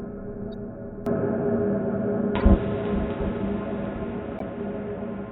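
At 0.53 s a corrupt frame is decoded: a single damaged frame plays anyway, leaving a faint, very brief blip of misplaced energy. From 1.06 s to the end the sound drops slightly in level and loses everything above 3.8 kHz, turning dull and boxy with a low new noise floor and no gap at the change. The likely cause is the input being switched to a poorer device. Louder corrupt frame bursts follow at 2.36 to 2.42 s, spanning a few frames, and at 4.38 to 4.42 s, spanning about two. Each is a short squeak of noise where misread codes put energy at the wrong frequencies.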